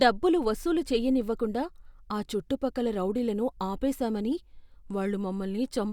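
Nothing stood out as a technical problem on listening to this speech recording.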